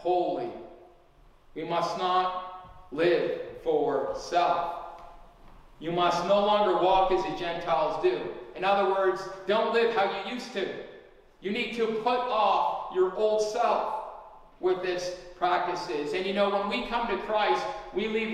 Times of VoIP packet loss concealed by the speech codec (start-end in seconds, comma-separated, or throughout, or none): none